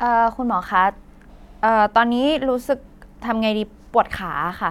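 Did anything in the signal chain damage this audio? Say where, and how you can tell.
No, nothing along the chain seems to have touched this speech, and there's no stage I'd point to as having left a mark on it.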